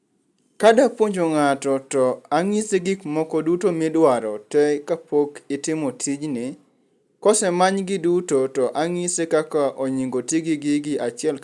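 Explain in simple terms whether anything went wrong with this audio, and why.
Listening to this speech recording, nothing stood out as having gone wrong at any point.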